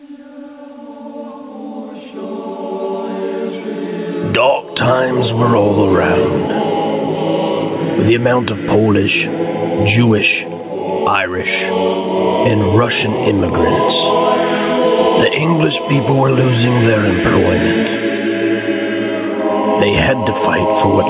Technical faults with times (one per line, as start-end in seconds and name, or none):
0.00-21.09 gain pumping